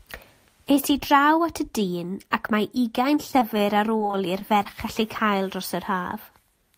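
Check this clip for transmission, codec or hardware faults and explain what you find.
Two kinds of transmission fault occur, both from lost packets.

Short concealed packet loss at 3.31–3.35 s and 3.39–3.54 s: about 20 ms never arrived. The decoder extended the previous sound, leaving a brief smear.

Repeated packet loss (robotic sound) from 3.97 to 4.67 s: five gaps, the longest 23 ms. Repeated patching covers about 14% of the stretch, giving choppy, robotic speech.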